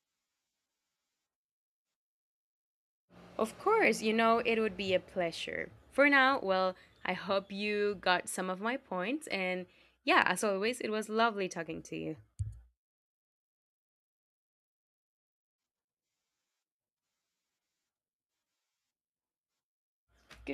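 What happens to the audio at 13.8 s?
Nothing goes wrong at 13.8 s: the speech carries on cleanly through that point, with no dropout, click, distortion or other fault to be heard.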